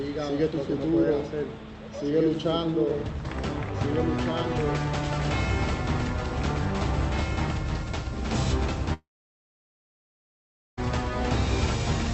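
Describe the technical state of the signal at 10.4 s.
At 10.4 s the signal sits inside a long network dropout running from about 8.93 s to 10.79 s, and the likely cause is that packets stopped arriving for roughly 1.84 s. The receiver briefly stretched the last sound as a fading buzz or hiss, then gave up. By 10.4 s only near-silence remains. On a waveform this is a flat, near-zero line. On a spectrogram it is an empty vertical band until the audio resumes at 10.79 s, with that stretch simply gone.

Running through the whole clip, this moment included, is a doubled audio track. A second, full-band copy trails the original by about two seconds, around 5 dB quieter, with no reverberant tail, most likely from a second capture path or a misaligned edit. It sounds like a dry, delayed echo of everything. On a waveform it appears as a smaller repeat of each shape two seconds later. On a spectrogram it appears as the same patterns offset in time and fainter, both capped near 8 kHz by the call codec.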